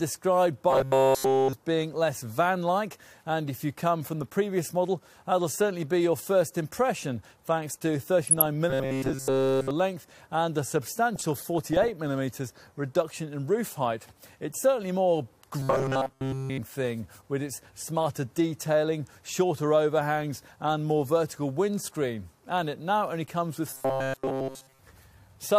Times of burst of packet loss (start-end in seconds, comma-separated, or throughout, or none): none